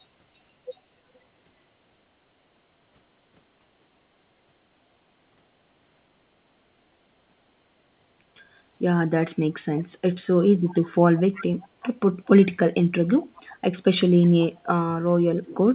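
Faint echo leak comes back about 368 ms late in short, quiet scraps at 9.78–9.84, 10.69–10.75, 11.16–11.44, 11.6–11.88, 13.21–13.55, 14.22–14.29 and 14.56–14.66 s, likely a far-end echo canceller letting loudspeaker pickup through. The telephone-band sound, topping out at 4 kHz, fits G.711 A-law.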